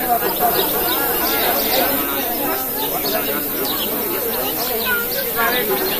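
From 0.40 to 2.02 s there's a doubled audio track: an equal-level copy trailing about 300 ms behind, with no room decay and abrupt edges, likely a second capture path.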